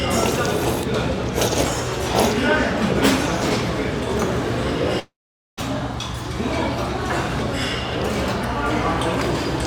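A recording of everyday sounds with two faults close together. From 4.99 to 5.59 s there is a long network dropout, likely the stream stopped arriving and the receiver had to cover about 0.58 s of missing audio on its own. It first stretches the last sound into a fading buzz, then leaves nearly half a second of silence before the sound resumes further on, with that stretch simply gone. Shortly after, at 5.94 s, comes a block of digital silence: a tiny run of samples, which fits a 32-sample block, was output as zeros, probably because the buffer wasn't filled in time. Because the signal drops straight to zero and back with no fade, the 0.67 ms hole comes across as a tick or dip rather than as silence.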